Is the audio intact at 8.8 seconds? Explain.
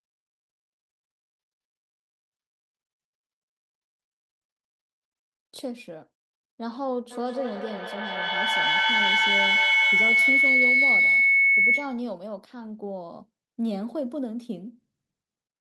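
No. At 8.8 seconds the speech is hit by a feedback howl that runs from 7.11 to 12.11 s. Sound from a loudspeaker is being picked up again by a microphone in the same room, and each trip round the loop comes back louder, so the repeats grow and narrow into a tone around 2 kHz, with the loop repeating roughly every fifth of a second. It peaks about 10 dB above the speech. A spectrogram shows a bright, thickening horizontal band near 2 kHz, and the waveform swells into a dense block.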